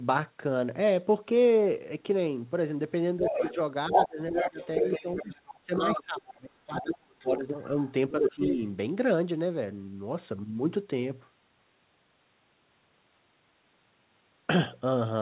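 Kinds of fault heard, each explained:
Speech suppressed in double talk: From 3.19 to 7.37 s, and again from 8.19 to 8.61 s, the talker's speech dips. In the first stretch it falls by as much as about 25 dB, for around two seconds in total. The later dip is shallower, about 10 dB. The likely cause is an echo canceller that could not separate the near talker from loudspeaker echo, so it turned everything down while both sides spoke.
Other side's voice leaking through: A second voice is heard at 3.25 to 3.54 s, 3.92 to 6.01 s, 6.79 to 7.26 s and 7.86 to 8.55 s. It is mostly about as loud as the talker, though the stretch at 6.79 s sits about 10 dB lower. This is likely the far end playing through the talker's loudspeaker and being picked up again by the microphone, with the echo canceller removing too little of it.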